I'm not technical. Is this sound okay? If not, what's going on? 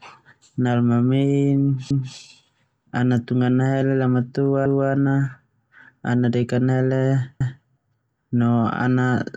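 No. The speech has overlapping chunks. It was handled in pieces about 2.5 seconds long, and each piece starts a quarter second before the last one ends. That bit repeats, causing a stutter at 1.91–2.16, 4.66–4.91 and 7.41–7.66 seconds.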